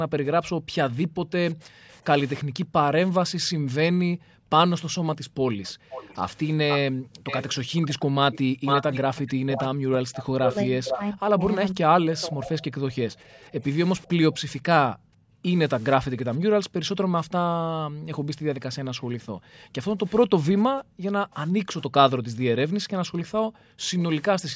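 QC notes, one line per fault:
0.00–8.13 s, background gated by the echo canceller: room sound dips by about 40 dB in bursts totalling around 3 s as the canceller clamps the microphone during far-end playback.
0.45–2.44 s, echo leak: a faint delayed copy of speech, around 30 dB down, trails by 348 ms, likely residual loudspeaker pickup the canceller failed to remove.
1.38–2.05 s, speech suppressed in double talk: the talker drops by roughly 40 dB for about half a second, likely the canceller muting both sides while they overlap.
5.64–14.37 s, echo leak: a strong echo only slightly below the speech follows at a 500 ms delay, likely loudspeaker sound passing the canceller almost unattenuated.
8.42–18.31 s, speech suppressed in double talk: the talker repeatedly dips or cuts out, around 40 dB deep and about 3 s in total, likely suppression during simultaneous talk.
12.83 s to end, background gated by the echo canceller: the room floor again drops by about 40 dB, around 4 s in total, pumping as the canceller engages and releases.
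20.08–24.02 s, echo leak: a quiet 500 ms echo, around 25 dB below the speech, likely uncancelled loudspeaker return.
22.19–22.23 s, speech suppressed in double talk: a brief 40 ms dip of around 30 dB in the talker, likely the canceller reacting to overlapping speech.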